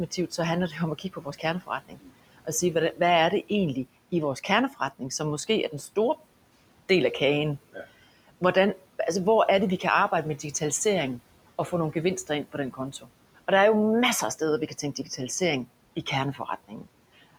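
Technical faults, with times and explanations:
Throughout: noise suppressor artifacts. The suppressor pulls down every band it judges to be steady noise, frame by frame, cutting the room noise, which sits about 20 dB below the speech, by about 18 dB. The background sinks in pauses and swells back under the speech. On a spectrogram the noise floor shows blotchy, flickering patches that come and go with the speech rather than a smooth, even haze.
0.11–6.17 s, 11.18–13.38 s, 14.39–15.41 s, 15.96–17.37 s: speech cut by the noise suppressor. Here the suppressor mistakes parts of the speech for noise and turns them down with the background, by up to about 19, 14, 10 and 15 dB in the four stretches. Roughly a second is lost in the first stretch and about 150 to 300 milliseconds in each later one, so soft consonants and word endings sound swallowed or faint. The waveform shows sudden dips in the envelope, and the spectrogram shows gaps carved into the speech energy.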